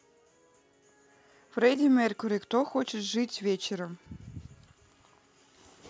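No technical faults are audible.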